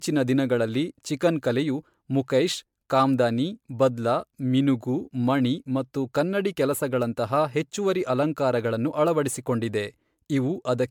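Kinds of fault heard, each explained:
Generation loss: The speech sounds swirly, smeared and hollow throughout, with blurred consonant attacks and no content above 19.9 kHz, more degraded than a single pass at this quality would give. The likely cause is repeated MP3 re-encoding, around fifteen passes near 140 kbit/s.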